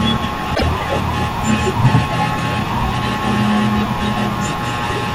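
A broken MP3 bit reservoir shows up from 0.54 to 0.63 s, where the speech skips ahead and is replaced by a short disturbance lasting roughly 90 ms. The likely cause is lost MP3 frames: the frames after the gap expect to draw part of their data from space left in earlier frames, but those bytes now belong to different frames, so they decode incorrectly. The span works out to a few frames and fits 24 ms frames.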